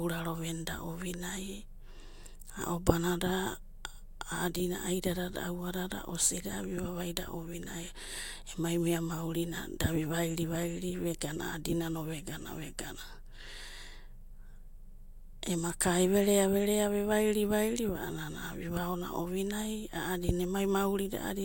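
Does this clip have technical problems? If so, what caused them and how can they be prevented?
No, the speech signal is technically sound, with nothing at any point that calls for a cause or a preventive fix.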